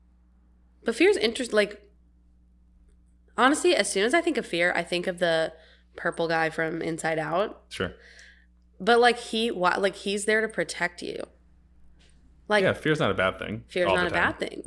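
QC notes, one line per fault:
throughout: resampler restarted on every block. The 48 kHz to 24 kHz conversion loses continuity at each 40 ms edge, giving a 25 Hz buzz that rides on the speech.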